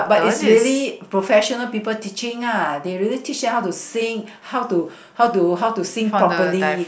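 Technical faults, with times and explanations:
No technical faults can be heard anywhere in the recording, and the signal stays intact and continuous throughout.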